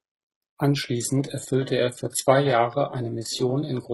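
At 0.89 s the speech switches abruptly, with no gap, to a lower-bitrate version of the adaptive stream, which continues to the end. Nothing above 11.5 kHz remains and the top end turns synthetic, consistent with a step down from AAC-LC to low-rate HE-AAC.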